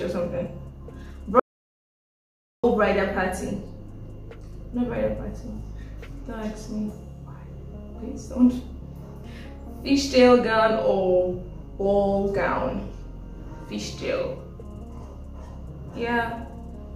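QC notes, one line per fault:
1.40–2.64 s, audio dropout to silence: the sound cuts out for about 1.24 s into dead silence with no room tone, likely a lost input or link while recording continued.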